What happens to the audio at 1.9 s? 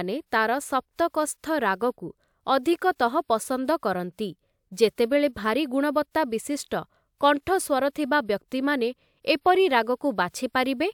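Nothing goes wrong at 1.9 s; the speech carries on cleanly through that moment with no audible fault.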